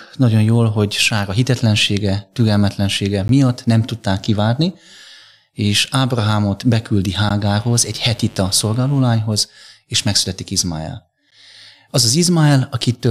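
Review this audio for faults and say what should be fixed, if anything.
Three short holes with hard edges cut into the speech at 3.28 s, 7.29 s and 11.31 s, each about 13 ms of silence. The first falls between "a hitetlensége türelmetlensége" and "nem tudták kivárni". They recur exactly every 4.0 s, which identifies them as gaps between chunks: the audio was handled in 4-second blocks, and a sliver of silence was inserted at each join, from padding or a late chunk start, while the speech around each join stays intact. Join the chunks seamlessly, trimming any codec padding and scheduling each block to start exactly where the previous one ends.

From 7.42 s to 9.23 s a steady, raspy buzz sits under the speech, about 25 dB below the speech level. This is mains buzz at a 50 Hz fundamental. Sharp switching spikes enter twice per mains cycle, and their harmonics stack up into the kilohertz range, giving a gritty edge rather than a smooth hum. 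Remove the dimmer or rectifier from the signal path, or use shielded, balanced cabling and proper grounding.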